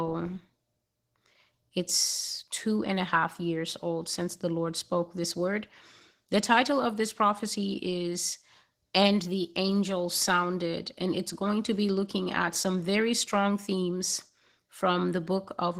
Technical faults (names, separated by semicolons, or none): Opus voice compression